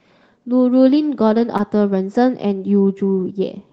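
At 1.57 to 1.61 s, a short concealed packet loss interrupts the speech. About 20 ms of audio failed to reach the decoder in time, and the receiver filled roughly 15 ms of the gap by extending the preceding sound before crossfading back into the real signal. The result is a brief smeared, wobbling patch. It sits within a call path whose 8 kHz band limit fits Opus at around 24 kbps.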